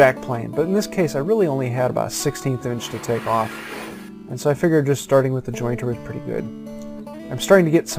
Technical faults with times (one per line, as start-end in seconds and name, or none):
0.00-7.99 imaging from sample-and-hold upsampling